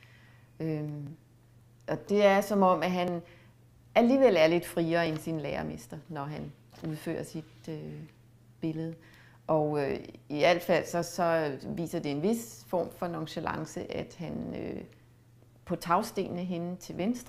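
Tiny skips forward in the sound occur at 1.07, 3.08, 5.06 and 11.03 s. Each is an overlap between stream segments. The audio arrives in segments of about 2 s, and here neighbouring segments carried overlapping time stamps. The player trimmed the overlap, but that audio wasn't actually duplicated, so roughly 10 to 18 ms of real sound was discarded at each boundary, and the waveform jumps abruptly there.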